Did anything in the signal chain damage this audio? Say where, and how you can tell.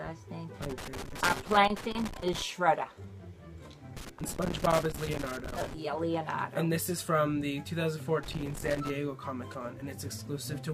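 Yes, in the analogue wiring. Loose connector crackle appears from 0.62 to 2.42 s, 3.97 to 5.74 s and 8.23 to 8.90 s. Each burst is irregular scratching. A worn contact is making and breaking as it moves, chopping the signal.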